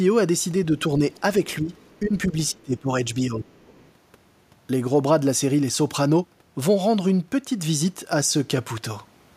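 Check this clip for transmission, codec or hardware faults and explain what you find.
Two echo-canceller faults appear in this speech, both in its first four seconds.

Other side's voice leaking through occurs at 1.12 to 1.21 s, 1.77 to 2.08 s and 3.76 to 3.92 s. Faint scraps of a second voice are heard well below the talker. It is likely loudspeaker echo that the canceller failed to remove.

Speech suppressed in double talk occurs at 1.62 to 1.71 s, 2.02 to 2.35 s, 2.52 to 2.90 s and 3.14 to 3.75 s. The talker's level drops. The first two are mild dips, and the last two are deep, near cutouts. The likely cause is the canceller turning both its talker and the loudspeaker echo down while both sides talked.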